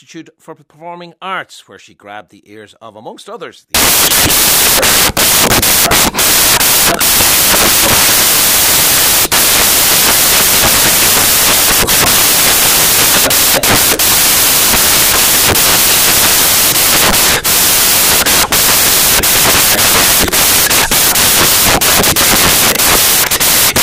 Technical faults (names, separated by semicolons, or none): samples built from the wrong bytes